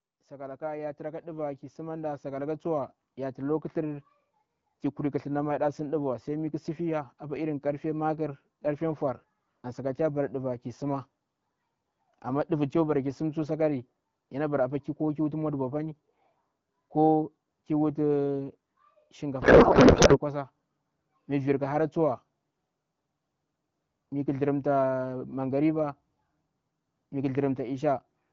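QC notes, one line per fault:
0.27 to 13.3 s, automatic gain rising: the level climbs steadily by about 15 dB over roughly thirteen seconds, and the background lifts right along with the speech. The gain control judged the input too quiet and kept nudging its gain upward rather than applying one step, so everything in the signal swells together instead of the talker simply getting louder. The slow, even ramp across the whole span is the tell-tale of a control loop, not a change at the source.
19.42 to 20.19 s, codec payload misread: for about 0.8 s the speech is replaced by garbled, warbling noise that barely tracks the talker's rhythm. The decoder is receiving well-formed frames but looking for the bit fields in the wrong positions, which fits AMR frames packed octet-aligned being unpacked as bandwidth-efficient. Every parameter it pulls out is wrong, so it synthesises nonsense until the packing agrees again. 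The AMR wideband coding around it stays clear, with only light codec colouring.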